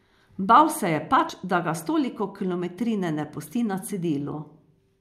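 Speech, with one fault: damaged data in a compressed stream. At about 1.3 s, right after "se je" and before "da ga s toliko", there is a brief glitch lasting only a few milliseconds. Part of the compressed data there was corrupted. The decoder could not read those frames correctly. It lost sync and jumped forward to the next valid frame header. That produces the short glitch.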